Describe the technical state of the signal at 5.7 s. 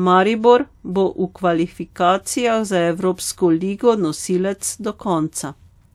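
At 5.7 s the speech signal is intact, with no dropout, clipping, glitch or other fault audible at that moment.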